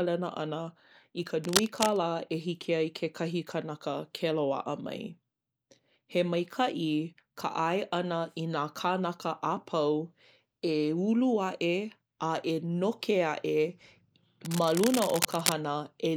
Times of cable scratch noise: 1.44-1.97, 14.45-15.52

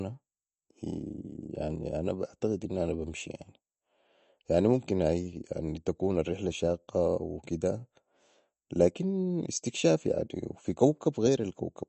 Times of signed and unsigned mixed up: none

